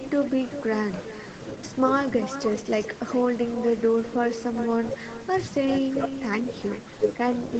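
From start to finish, the speech carries an echo with no canceller. The far end's loudspeaker feeds its microphone, and nothing removes the return. Each phrase comes back around 400 ms later, about 11 dB quieter and thin, through a band topping out at 8 kHz.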